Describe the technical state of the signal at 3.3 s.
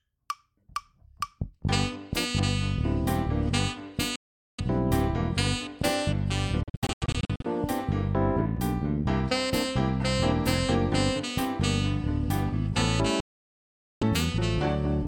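Around 3.3 s the signal is intact, with no dropout, distortion or other fault audible at that moment.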